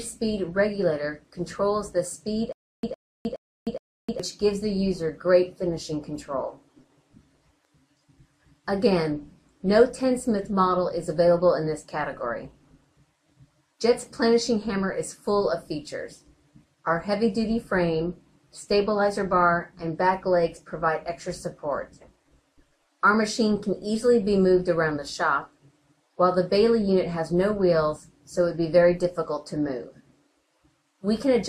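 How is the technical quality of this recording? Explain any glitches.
From 2.53 to 4.2 s there is a stutter with silent gaps: a 110 ms burst of sound repeats four times, each followed by about 308 ms of dead digital silence, in a steady 418 ms cycle. The likely cause is a stalled player or stream replaying its last fragment on each retry, so the audio due in that span is lost.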